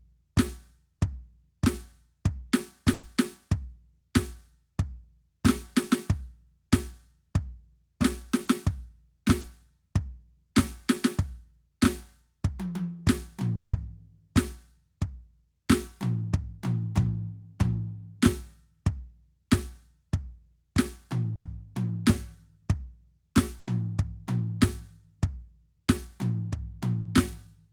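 At 2.93 to 3.05 s the music freezes into a held, fading tone for about 100 ms, then jumps ahead. This is a burst of packet loss: several packets went missing in a row, and the receiver stretched the last sound to cover the gap.

At 8.45 to 8.49 s and again at 9.41 to 9.45 s, brief smears of about 20 ms each blur the sound. Each is a short concealed packet loss, where a few hundredths of a second were patched by continuing the previous audio.

From 13.55 to 13.75 s the sound drones and fades for about 180 ms, falls silent for about 70 ms, and resumes further on. A long network dropout is the likely cause, with the missing stretch never played.

At 21.35 to 21.47 s a fading tail of about 100 ms drops into roughly 70 ms of silence. At 23.59 to 23.69 s there is an 80 ms held smear. Both are bursts of packet loss, with the lost audio skipped.

At 27.01 to 27.07 s a 40 ms wobble marks another short concealed packet loss, bridged from the preceding sound.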